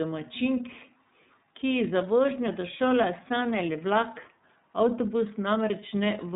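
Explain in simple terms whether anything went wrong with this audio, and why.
iLBC codec damage runs through the whole clip. This internet-phone codec handles the speech in short chunks, likely 30 ms each, coding each one separately. It discards everything above 3.8 kHz, so voices sound dull, slightly rough and somewhat synthetic.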